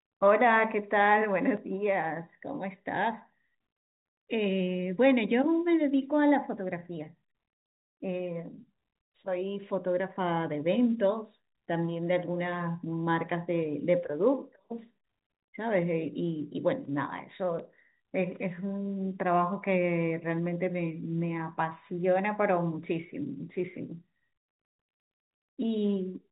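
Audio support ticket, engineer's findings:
Nothing stood out on listening; the speech carries the expected telephone-band sound of G.711 coding, with nothing audible above about 3.8 kHz.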